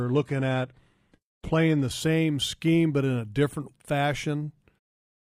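For the first 2.0 s the speech sounds thin and smeared, with nothing real above 12.3 kHz and a hissy, synthetic top. Then, just before "scheme but in a", it turns abruptly clearer with no gap. This is an adaptive stream starting at a low bitrate: the opening sounds like a very low-rate, roughly 16 kbit/s HE-AAC version, before the player steps up to something nearer 96 kbit/s AAC-LC.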